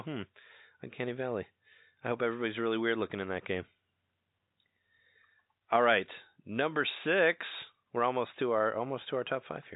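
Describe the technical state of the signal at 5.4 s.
At 5.4 s the speech is intact, carried cleanly through G.711 telephone coding with its band limit near 3.8 kHz and no audible fault at that moment.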